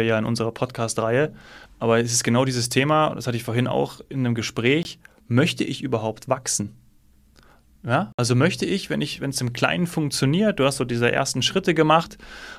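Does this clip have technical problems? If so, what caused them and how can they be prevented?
Yes. The speech drops to silence at 4.83 to 4.85 s and at 8.12 to 8.19 s, for 20 ms and 61 ms. These are likely Bluetooth dropouts. Late packets were discarded, which fits one and then three lost packets. Speech resumes further on. Keeping the headphones close to the source prevents this.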